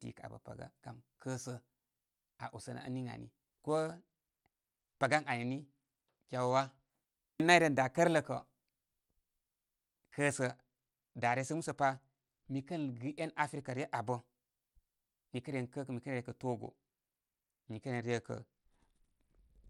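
Dull, gritty treble from 3.69 to 6.90 s, 10.33 to 14.00 s and 16.64 s to the end: a Bluetooth SBC bit pool drop, which points to roughly 31 falling to 13.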